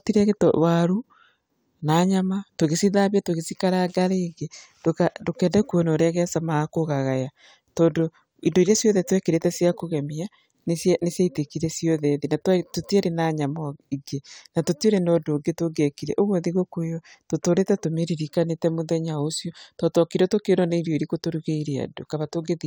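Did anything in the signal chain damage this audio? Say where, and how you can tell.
No, nothing in the signal chain has left an audible mark on this speech recording. Listening across the whole clip, no stage from capture to playback shows any damage.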